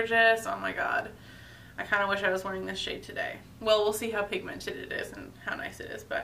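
No technical faults are audible anywhere in the audio.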